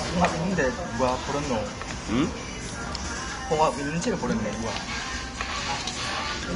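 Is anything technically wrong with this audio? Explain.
Yes. Throughout, the sound is hissy and grainy, with nothing above 10.6 kHz, likely from Vorbis compression at a low bitrate near 33 kbps, which turns fine treble detail into noise.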